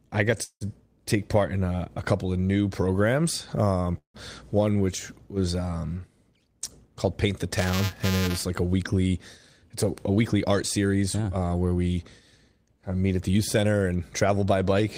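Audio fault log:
0.43–0.64 s and 3.98–4.17 s, call audio freeze. The first comes after "I got", the second just before "one which was um". Each time the last sound hangs as a fading buzz, then goes silent for about 80 ms and 110 ms. The audio then resumes where it stopped. That adds 175 ms and 164 ms of delay with nothing lost. The likely cause is held-up packets draining the jitter buffer.
7.54–8.43 s, buffer tearing. A robotic buzz near 375 Hz rides on the speech. That rate fits a 128-sample buffer. A small slice of each period replays audio about 5 ms old. The hard joins on both sides of that slice produce the rattle.
10.09–11.31 s and 13.33–14.55 s, jitter buffer speed-up. The first run falls between "a a" and "uh where we". Speech runs at 112% and then 116% speed, with pitch unchanged, so it sounds hurried. Short pitch-period pieces were cut repeatedly, trimming roughly 150 ms and 200 ms of backlog.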